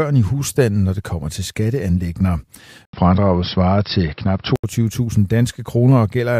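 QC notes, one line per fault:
2.85–4.64 s, likely input switched to a poorer device: an 80 ms gap, then dull speech with nothing above 5.5 kHz and a new faint background noise and level, unlike a simple filter.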